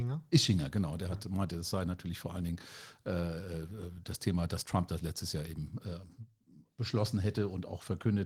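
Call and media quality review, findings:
No findings for this call and media quality review; the speech carries only the light coding character expected of Opus voice compression at 20 kbps.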